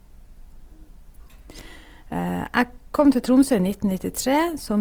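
Throughout the speech, smeared, watery artefacts of heavy compression remain even though the file reaches 20.2 kHz and its high-rate MP3 encoding adds almost nothing. Unlike a simple low-bitrate file, this is low-bitrate audio saved at a high bitrate, likely from an earlier low-rate encode.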